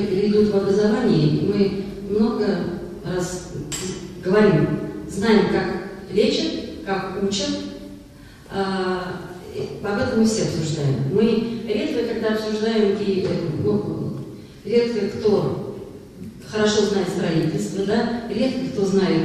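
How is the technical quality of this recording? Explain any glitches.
No glitches detected: signal path holds steady throughout, with nothing to flag.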